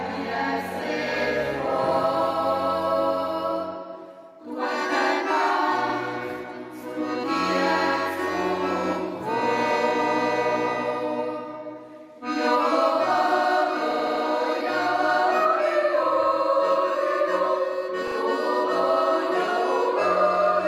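The audio has repeated frames in three spots, where a short chunk of encoded audio gets played again and stutters. At 5.89 s a 60 ms block plays twice. At 13.91 s an 80 ms block repeats four extra times, up to 14.23 s. At 18.07 s a 40 ms block repeats twice.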